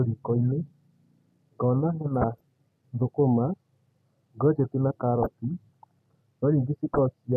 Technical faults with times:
0.36-0.46 DAB burbling
2.15-2.41 DAB burbling
5.24-5.26 DAB burbling
6.94-6.98 DAB burbling

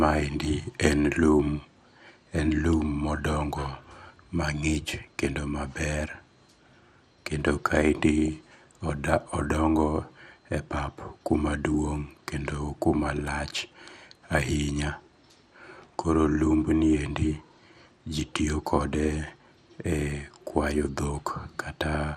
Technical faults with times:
0.00-22.17 MP2 compression
8.25-8.28 DAB burbling

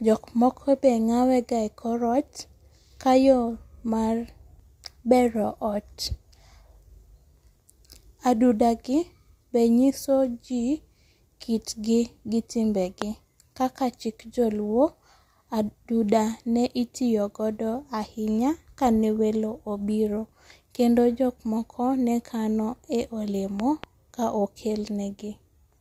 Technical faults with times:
13.02-13.04 loud pop
23.60-23.86 loud pop

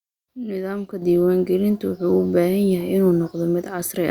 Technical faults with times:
1.02 microphone volume stepped up

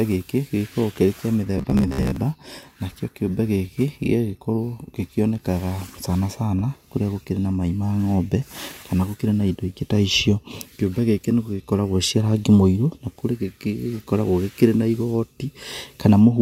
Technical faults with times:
1.58-2.16 robotic sound from repeated short buffers

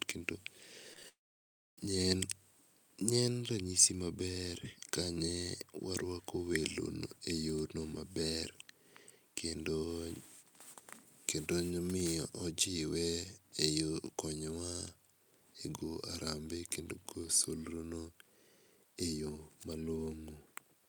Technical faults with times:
0.93-1.04 repeated packet loss (robotic sound)
1.08-1.78 long network dropout

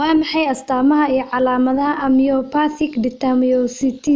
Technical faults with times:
none

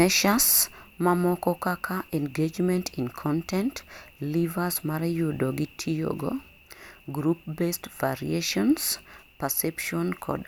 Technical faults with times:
none

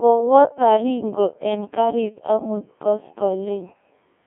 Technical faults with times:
0.00-4.26 Codec 2 vocoder

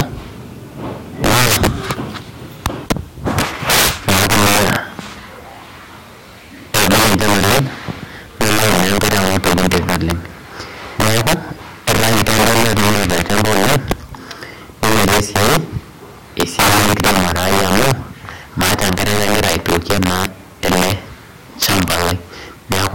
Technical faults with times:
0.00-22.95 integer overflow

